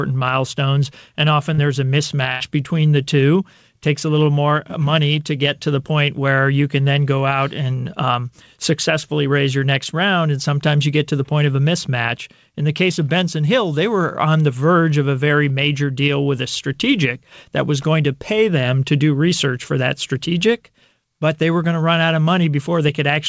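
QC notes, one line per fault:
1.54–1.60 s, short concealed packet loss: right after "milestones and often", about 40 ms never reached the decoder in time. It covered the hole by carrying the previous sound on for roughly 38 ms and then blending back, so you get a quick little smear.
2.32–2.42 s, burst of packet loss: about 80 ms went missing in a run just before "between the two takes". The receiver stretched the last sound over around 83 ms while turning it down, giving a brief held, fading patch, then the audio jumps ahead past the gap.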